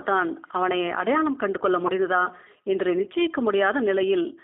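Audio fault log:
Throughout, G.729 codec: the speech is squeezed into a narrow line band of roughly 250 Hz to 3.6 kHz, so it loses its low body and all its upper air and sibilant detail. The rough, slightly synthetic grain is plainly audible and fits an 8 kbit/s G.729A coder, which resynthesises each short frame from a vocal tract filter, a pitch estimate and a handful of excitation pulses rather than carrying the actual waveform.
1.87 to 1.92 s, VoIP packet loss concealed by the speech codec: about 20 ms of audio went missing, which points to a single lost packet. The decoder filled the hole by repeating its last pitch and filter settings at falling gain, so the sound smears briefly into a stretched, fading sound. Because each frame is predicted from the one before, the speech stays weakened or distorted for a moment after the gap.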